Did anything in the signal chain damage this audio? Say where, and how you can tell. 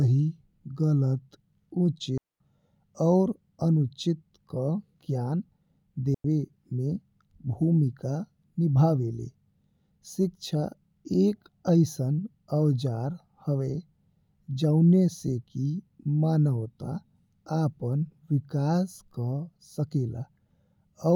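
Yes: two clean, near-silent holes at 2.18–2.40 s and 6.14–6.25 s, with no noise burst either side, mark a digital wireless dropout, the receiver briefly muting the lost link.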